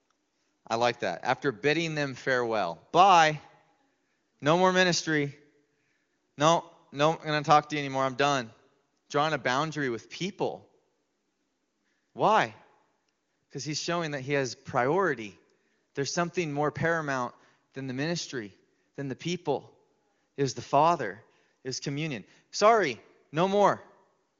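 Nothing stood out on listening to this speech recording, which has the bandwidth of an AMR wideband (HD Voice) call, with no content above about 7.3 kHz.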